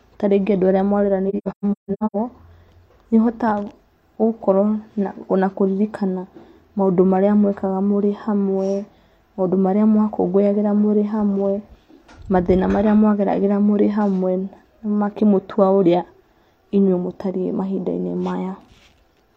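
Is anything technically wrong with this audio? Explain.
Yes. From 1.29 to 2.16 s the speech has AAC frame loss with muting. About 0.6 s of audio drops out in scattered gaps, the longest around 150 ms. The decoder zeroes each missing frame, and the overlapping windows fade the edges, so the holes are soft rather than hard cuts.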